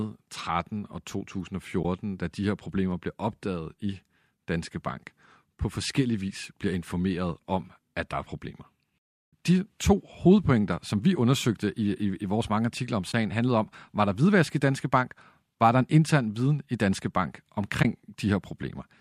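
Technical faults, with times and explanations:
1.83–1.85 s, 13.12–13.14 s and 17.83–17.85 s, AAC frame loss with muting: about 20 ms of audio drops out, consistent with two lost frames whose spectrum the decoder zeroed. Overlapping windows fade sound out and back in, so each hole is soft-edged. A spectrogram shows a narrow blank vertical stripe; the waveform tapers smoothly into a brief flat gap.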